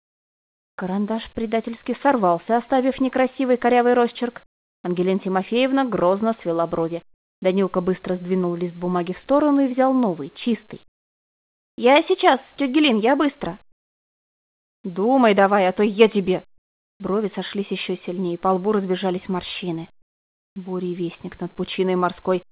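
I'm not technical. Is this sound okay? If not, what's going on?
No, not quite. In the quiet moments the real background is swapped for a smoother filler: comfort noise in place of the background. It happens at 7.14–7.42, 10.88–11.78, 13.72–14.84, 16.58–17.0 and 20.02–20.56 s. The third dips clearly quieter, the fourth a bit less so. The likely cause is the call system stopping transmission when nothing is happening and the receiving end inventing stand-in noise until sound returns.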